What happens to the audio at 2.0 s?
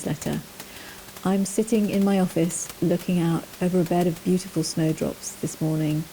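At 2.0 s the speech is intact, with only the room noise sitting about 19 dB below it.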